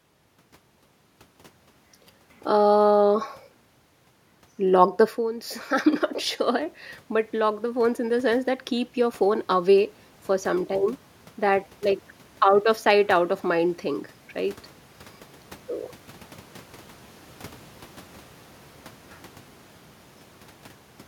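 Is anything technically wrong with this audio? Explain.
Yes, there's one. From 6.43 to 9.78 s, after "I'm not" and before "for some time", the automatic gain is rising: the level at the mic fell by about 15 dB, from the talker moving back around 5 s, so the AGC slowly added about 5 dB, swelling the voice and room noise together.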